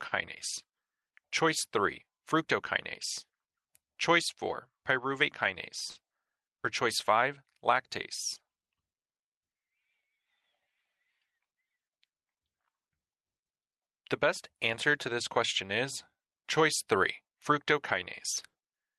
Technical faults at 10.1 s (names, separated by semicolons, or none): clock drift between sender and receiver; repeated timing corrections